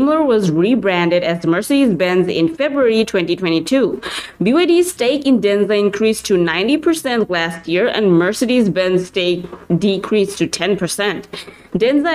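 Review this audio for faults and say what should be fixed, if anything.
No faults turn up in this audio, so nothing needs to be fixed.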